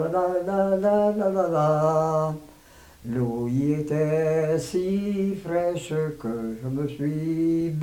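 No dropouts, clicks, distortion or level jumps turn up anywhere in the audio.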